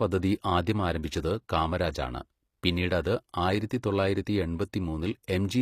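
From start to finish the speech has a gritty, metallic treble, with s sounds turning lispy, which points to HE-AAC compression, likely at a low bitrate around 24 kbps. The upper band is not the original but a copy of lower bands shifted upward, so its harmonics fail to line up with those below. A spectrogram would show a sharp crossover, with repeated, blocky texture above it.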